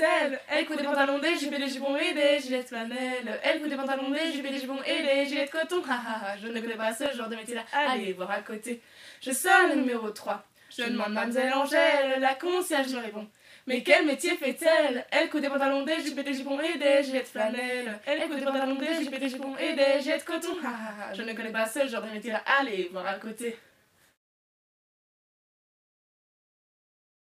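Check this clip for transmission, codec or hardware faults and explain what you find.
Two faults are present: a single dropped-samples click and a later train of clicks.

At 7.06 s there is one sharp click from dropped samples. Well under a millisecond of audio is missing, so the waveform steps abruptly from one value to a later one with no transition. That discontinuity produces a broadband tick, visible as a thin vertical line in the spectrum. The gap is far too brief to remove any audible content. A likely cause is a momentary buffer hiccup in the capture or transfer path.

From 18.54 s to 19.44 s a train of clicks runs at a regular 11.2 per second, about ten pulses in all. The pulses share much the same shape and peak at about 5 dB above the surrounding signal, so they are heard as an even ticking laid over the sound. The steady spacing points to a periodic source, likely electrical interference from nearby equipment or a faulty connection or power supply.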